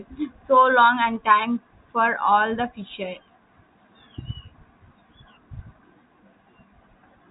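Nothing's actually wrong in this bit of speech; it's just carried over ordinary G.711 telephone coding, so the sound tops out at about 3.8 kHz the way a regular phone call does.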